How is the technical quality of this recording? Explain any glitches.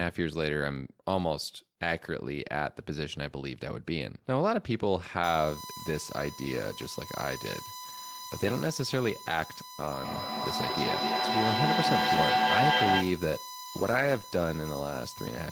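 The recording has two clear technical problems: a steady electrical whine through the second part of the speech, and a burst of acoustic feedback near the end.

From 5.24 s to the end there is a USB whine, a thin fixed-pitch tone at 1 kHz sitting about 15 dB below the speech. The bus draws current in 1 ms frames, and that pulsing load leaks into the audio through shared power or ground.

From 9.91 s to 13.28 s a feedback howl rises around 700 Hz, pulsing roughly every 200 ms and peaking about 4 dB louder than the speech. Two devices in the room share the call, so each pass from loudspeaker to microphone adds gain.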